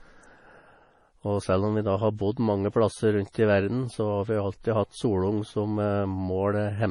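Throughout the speech, the sound is dull and watery. Nothing reaches above 10.6 kHz. Quiet detail swirls and flickers, and s sounds turn metallic. The cause is likely heavy MP3 compression at a low bitrate, around 32 kbps. Short of bits, the encoder cuts the treble and drops weak frequency lines.

From 3.32 to 3.35 s there is pre-echo. A sharp attack falls late in a codec block. Noise sized for the loud part spreads back about 25 ms into the quiet before it. A brief hiss leads in, and the attack sounds smeared.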